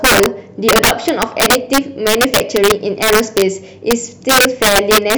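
Integer overflow runs throughout the speech. The signal is driven about 7 dB past the integer limit, so on a few percent of samples the loudest peaks wrap to the opposite sign instead of being held. Each wrap is heard as a violent crack, far harsher than clipping.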